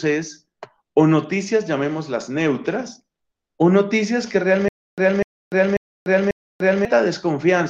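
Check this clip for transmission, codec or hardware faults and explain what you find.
One fault here. From 4.68 to 6.85 s there's a stutter with silent gaps: a 247 ms burst repeats four times, split by 294 ms of dead silence, likely a stalled stream replaying its last fragment.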